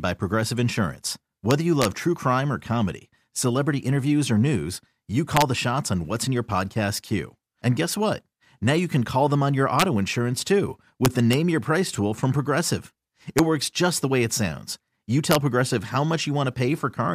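Integer overflow cracks the speech at 1.51–1.85 s, 5.37–5.42 s, 9.80–9.82 s, 11.05–11.33 s, 13.39 s and 15.31–15.35 s. Peaks only about 1 to 2 dB past the integer limit wrap to the opposite sign instead of being limited, producing violent cracks far sharper than clipping.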